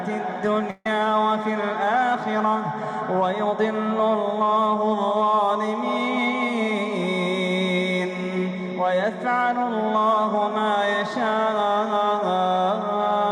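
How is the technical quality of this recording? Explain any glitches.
One fault stands out: a burst of packet loss from 0.70 to 0.86 s. A run of consecutive packets, about 150 ms of audio, never arrived in time to be played, so the receiver covered the hole by stretching the last sound it had for about 148 ms while turning it down, ending in about 20 ms of silence. The result is a smeared, fading tail followed by a brief dropout before the sound resumes, with that stretch of the original simply gone.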